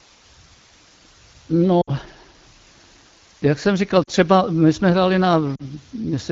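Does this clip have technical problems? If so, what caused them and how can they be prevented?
Yes. The speech has two faults.

Throughout, there is a constant, even hiss. This is low bit depth with dither. The sound fits about 8 bits. At that depth, rounding error is large. Dither spreads it into steady white noise instead of distortion. The hiss sits only about 25 dB below the speech. It does not pump or crackle. To prevent it, record and transmit at 16 bits or more, and apply dither only at the final reduction.

At 1.81 to 1.91 s, 4.03 to 4.10 s and 5.55 to 5.65 s, the speech briefly drops out. These are lost AMR speech frames. The first gap fits three lost 20 ms frames. The other two fit two lost frames each. When a frame fails its checksum, the decoder repeats the last good pitch and vocal tract settings at falling gain. The result drops to near silence within two frames. Speech then resumes weak or rough for a moment. 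The wideband coding around these gaps stays clear. To prevent it, improve radio coverage or error protection so fewer frames are corrupted in transit.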